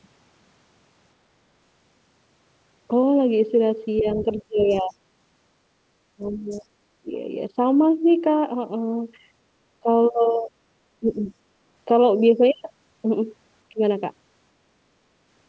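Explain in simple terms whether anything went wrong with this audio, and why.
Yes, a couple of things went wrong. The main one is speech suppressed in double talk. At 4.01 to 4.95 s and 6.15 to 7.09 s, the talker's voice drops away sharply for chunks of time, nearly vanishing at its worst. Smaller dips follow at 9.83 to 10.47 s, 11.0 to 11.32 s, and a very brief one at 13.73 to 13.8 s. The likely cause is that both ends spoke at once, and the echo canceller couldn't separate the two, so it turned everything down.

The second problem is the other side's voice leaking through, at 4.69 to 4.81 s and 6.50 to 6.61 s. You hear a faint, short scrap of a second voice underneath, well below the main talker. It lands inside those first two dips, which fits the same story: the far end was playing out of a loudspeaker, and the echo canceller likely missed a bit of it on its way back into the microphone. 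The call path itself sounds like an ordinary call line, with nothing above about 8 kHz.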